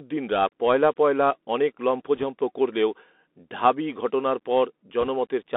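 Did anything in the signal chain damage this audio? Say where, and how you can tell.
Yes. At the codec stage, a Bluetooth CVSD headset codec runs throughout, fitting a 64 kbps link. The band sits at 250 Hz to 3.6 kHz, with scratchy s sounds and granular hiss, unlike a clean low-pass filter.

On the wireless link, bit errors on the Bluetooth voice link add rushing crackle at 2.16–2.23 s and 5.01–5.08 s, roughly one or two percent of bits. There are no loud clicks, unlike packet dropouts.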